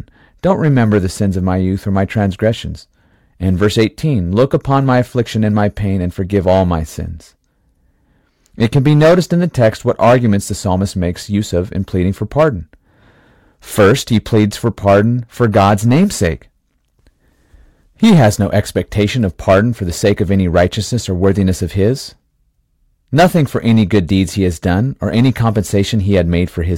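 Hard clipping runs right through this speech clip. The signal was driven roughly 10 dB past what a stage could pass, so the loudest peaks, a couple of percent of samples, get sliced flat, spraying high harmonics that come across as harsh crackly fuzz on louder moments.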